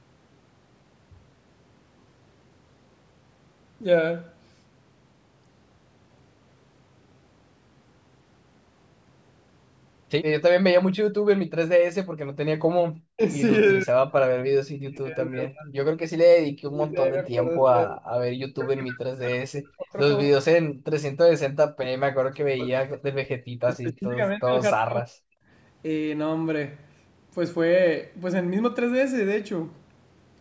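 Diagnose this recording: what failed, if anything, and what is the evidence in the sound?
Speech suppressed in double talk, at the call-processing stage. The speech level falls sharply at 13.15–13.23, 13.8–13.96, 14.88–15.74, 16.72–19.96 and 20.33–25.15 s, usually by around 40 dB, and by about 20 dB in the second event. The likely cause is the echo canceller mistaking near-end speech for loudspeaker echo while both ends talk at once.

Background gated by the echo canceller, also in call processing. At 25.43–25.48 s the room tone dips by about 13 dB for roughly 50 ms while far-end audio plays, then recovers. It is a brief, shallow gain dip on background noise alone, unlike the deep, sustained suppression of speech during double talk.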